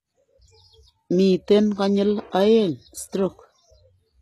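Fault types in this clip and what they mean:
HE-AAC compression: The treble sounds rebuilt rather than real, with gritty, lispy s sounds and nothing above 12.3 kHz, likely from a very low-bitrate HE-AAC encode near 16 kbps.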